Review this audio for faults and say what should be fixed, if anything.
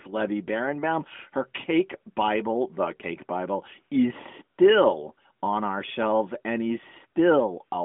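Nothing needs to be fixed, since the review turns up no faults in this audio.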